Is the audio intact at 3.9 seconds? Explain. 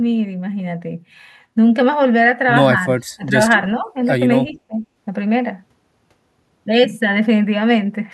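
No. Speech suppressed in double talk affects the audio from 3.82 to 3.88 s, right at the moment asked about. The likely cause is an echo canceller that heard both ends talking at once. Unable to separate the local talker from the loudspeaker echo, it turned the whole signal down. The speech briefly dips, by around 5 dB at its deepest, for roughly 70 ms in total. It sounds like a short, shallow duck in level before it recovers.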